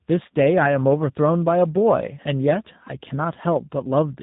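From start to finish the speech carries tandem speech coding: it has been encoded and decoded by two speech coders in succession, with the second working on the first one's already damaged output. The character points to a CVSD stage followed by a low-rate coder such as G.729A at 8 kbit/s. It sounds rough, muffled and warbly. A spectrogram shows nothing above 3.8 kHz, with smeared, blotchy harmonics. The waveform looks coarse.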